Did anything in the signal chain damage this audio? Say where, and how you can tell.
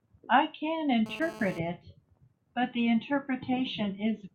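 Yes. GSM phone buzz entered at the analogue wiring stage from 1.06 to 1.59 s. A nearby 2G phone in a data burst was pulsing about 217 times a second, and the circuitry rectified it into a raspy buzz about 16 dB below the speech. A spectrogram shows harmonic lines spaced 217 Hz apart, and the waveform shows a regular pulse train.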